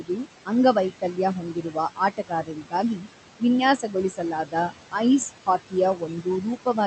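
Throughout the clip, noise suppressor artifacts are present. The suppressor pulls down the bands it judges to be steady noise by about 16 dB, frame by frame. The room noise, sitting about 12 dB below the speech, therefore drops away in the gaps and swells back under the speech.

From 0.0 to 3.42 s, the suppressor cuts speech along with the noise. Quieter parts of the speech are treated as background and pulled down by up to about 19 dB, for about a second in total. Those stretches sound swallowed and faint.

The same speech cut by the noise suppressor recurs from 3.78 to 4.95 s, where under half a second of speech is dipped by up to about 15 dB. It happens again from 5.46 to 6.86 s with drops of about 16 dB. In both spans, soft edges of the speech sound swallowed.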